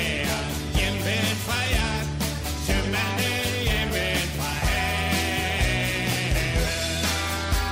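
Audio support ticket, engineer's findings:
No faults found in this audio; nothing to report for this ticket.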